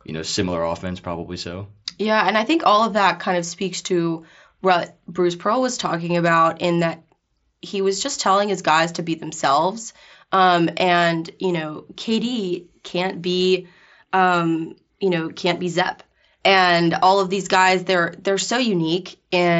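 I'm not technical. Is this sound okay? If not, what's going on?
Yes, this sound is okay; nothing is going wrong with it.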